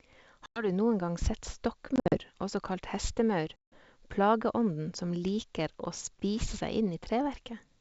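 A speech clip on what sounds like a clean G.722 wideband call, hit by packet loss on the ADPCM stream. Hard-edged silent gaps land at 0.46 to 0.68 s, before "noen gang sett", at 1.96 to 2.18 s, scattered after "noen gang sett", and at 3.56 to 3.78 s, before "plageånden som". Each time the decoder's predictor and step size drift out of step, so the speech returns slightly distorted before settling.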